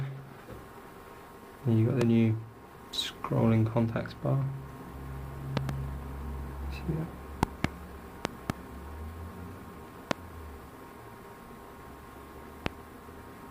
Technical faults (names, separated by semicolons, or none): loud pop